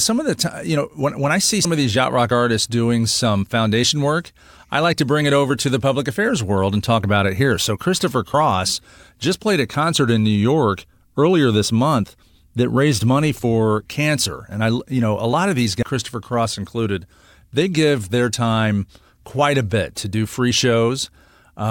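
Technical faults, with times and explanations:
1.65 s, compressed frames skipped: just after "when when I see" the speech jumps forward to "of these yacht rock", losing about three 32 ms frames, roughly 100 ms of audio. The decoder never plays those frames.
15.82 s, compressed frames skipped: after "a lot of these" a longer gap of roughly seven 32 ms frames, about 300 ms, is missing. The speech jumps ahead by that amount.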